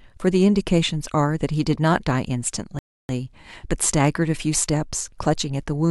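At 2.79 s the speech drops abruptly into silence, holds there until 3.09 s, and then picks up again at exactly the point where it broke off, with nothing skipped or repeated. That is a rebuffering stall: playback consumed all the audio it had downloaded and simply waited for more data to arrive. No material is lost, but the pause stretches the clip by about 0.3 s.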